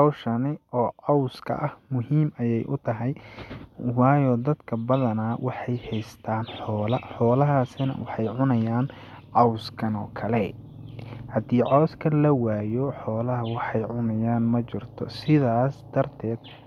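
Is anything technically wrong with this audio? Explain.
No, nothing technically wrong can be heard in this speech recording.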